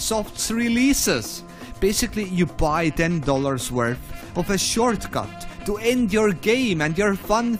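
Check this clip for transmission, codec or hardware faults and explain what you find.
No faults can be heard anywhere in this clip.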